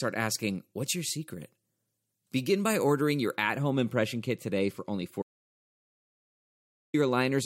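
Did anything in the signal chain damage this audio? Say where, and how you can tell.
Yes, two spots. From 0.32 to 3.36 s, just before "at home impression kit", there's pre-emphasis left on: the treble sits about 8 dB hotter at 10 kHz than at 1 kHz, so it's thin and spitty. That tilt fits the CD 50/15 µs curve, with the de-emphasis skipped at playback.

Then, right after "kit today for only", there's an audio dropout to silence from 5.22 to 6.94 s, about 1.72 s of silence with no room tone at all. The input likely dropped upstream, maybe a loose connection or a dead link, while the recorder kept writing.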